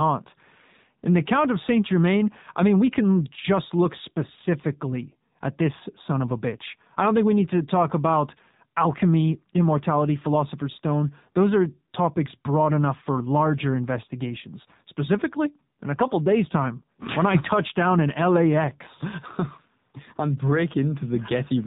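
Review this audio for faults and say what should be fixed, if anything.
The whole clip carries AMR narrowband mobile codec damage. Nothing above 4 kHz survives. The speech sounds buzzy and synthetic, with plainly audible coding artefacts. That fits a low AMR-NB mode of about 7.4 kbps. Record or route over a wideband path instead of a narrowband mobile link.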